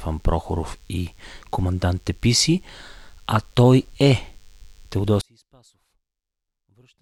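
Right from the start there's a DECT cordless phone buzz under the speech: a thin, steady 100 Hz drone full of harmonics, sitting well below the talking. A nearby handset or base is firing its radio burst every 10 ms, and the audio circuitry is rectifying it.

At 5.21 s the speech suddenly collapses by about 37 dB and stays that faint through to the end. The likely cause is one channel inverted: with one side's polarity flipped, the centred speech cancels in the mono sum, leaving only a faint residue of whatever differs between the channels.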